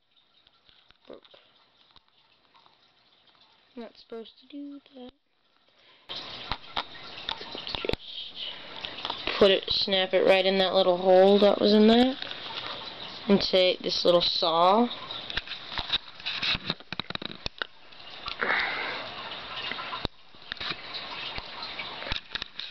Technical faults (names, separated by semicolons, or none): one channel inverted